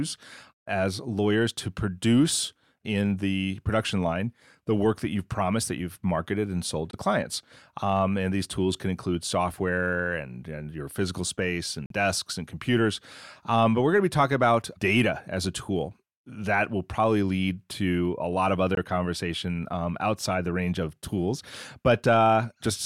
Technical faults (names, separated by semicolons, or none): Bluetooth dropout